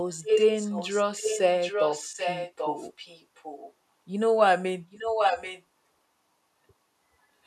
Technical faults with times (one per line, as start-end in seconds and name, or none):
0.12-3.73 echo leak
4.91-5.63 echo leak